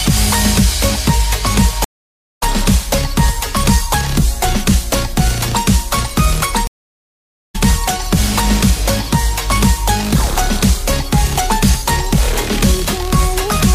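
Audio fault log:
1.84–2.43 s and 6.67–7.56 s, stream reconnect: the audio goes silent for 570 ms and then 867 ms as the connection drops and the player rejoins with a new decoder. Each time, playback picks up further along, about half a second ahead after the first gap and about a second ahead after the second, so material is skipped rather than just muted. That jump in position is what separates it from a plain dropout, where sound returns on schedule, with only the muted stretch missing.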